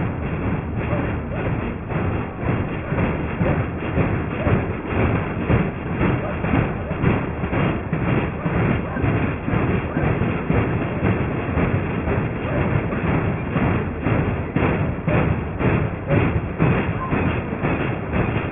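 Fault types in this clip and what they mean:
Aliasing: The sound was taken down to a lower sample rate without first filtering off the highs. Everything above 3 kHz folds back below that point at unrelated, wrong pitches. The fold edge points to a new rate of about 6 kHz. The folded energy sits roughly 15 dB under the wanted sound. It runs through the whole clip. Bright, hissy parts turn gritty and metallic. The spectrum stays crowded right up to 3 kHz.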